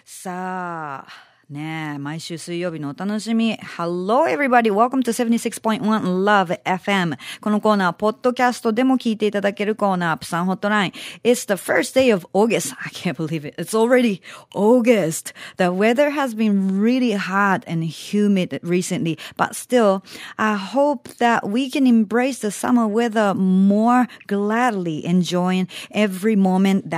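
From 0.22 to 5.19 s the automatic gain keeps rising. The AGC judged the speech too quiet and pushed gain up about 10 dB, so voice and background swell together.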